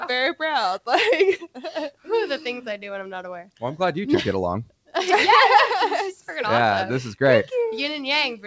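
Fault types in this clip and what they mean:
Sound cut by the noise suppressor: the suppressor classified part of the wanted signal as noise and attenuated it more than the surrounding material. Between 1.91 and 2.08 s the level sinks by up to about 12 dB, affecting roughly 150 ms in total.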